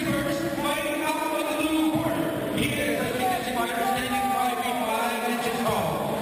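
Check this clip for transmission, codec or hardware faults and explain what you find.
One fault is present throughout: imaging from sample-and-hold upsampling. Each sample was repeated without smoothing, which fits a 12 kHz original rate. This leaves a mirrored spectrum at 6 to 12 kHz, about 16 dB down, heard as metallic fizz. A spectrogram shows an inverted copy above 6 kHz, and the waveform shows staircase steps.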